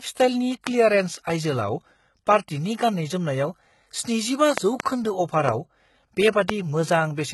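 Throughout the speech, the treble sounds gritty and metallic, with lispy s sounds. This is heavy HE-AAC compression, likely at a very low rate around 16 kbps: only the lower spectrum is coded and the treble is rebuilt from copied bands. On a spectrogram, the upper bands appear as blocky, smeared copies of the lower harmonics, misaligned across the crossover.

Loud pops sit on top of the speech, which carries on beneath them. There is one at 0.67 to 0.69 s, two in quick succession between 4.58 and 4.82 s, one at 5.49 to 5.51 s and one at 6.50 to 6.52 s. The likely cause is a sudden voltage step or pulse from a plug, switch, static or driver glitch. The pops peak about 20 dB above the speech, except the one at 5.49 s, which is about 15 dB above. They show as tall narrow spikes in the waveform and full-height vertical lines on a spectrogram.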